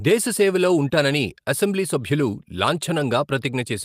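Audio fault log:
2.99–3.01 s, lost packet rebuilt from error correction: a brief 20 ms rough, noisier patch with no gap, as a low-bitrate backup copy carried in the next packet filled the loss.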